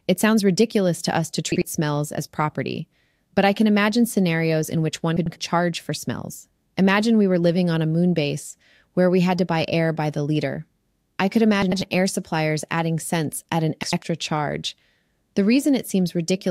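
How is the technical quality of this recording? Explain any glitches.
The speech has four brief garbled spots, each caused by frames out of order. They fall at 1.52–1.62 s, after "ridiculous to us to"; 5.17–5.36 s, after "scenarios in which one"; 11.62–11.82 s; and 13.83–14.03 s, after "adding cents at an". At each spot two adjacent blocks were decoded in swapped order, 48 ms each in the first and 96 ms each in the others. The halves play exchanged, giving a jumbled flutter. No time goes missing.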